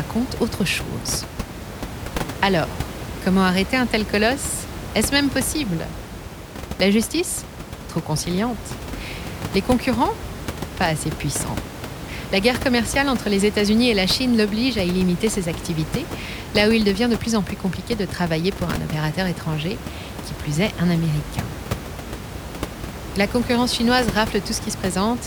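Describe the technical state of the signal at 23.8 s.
At 23.8 s the audio is intact, with only the room's own background noise sitting about 10 dB below the speech.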